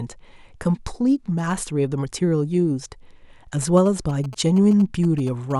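From 3.62 to 5.52 s, a galloping dit-dit-dit of short 217 Hz buzzes sits well below the speech: GSM signalling bursts from a nearby 2G phone, rectified by the audio circuit.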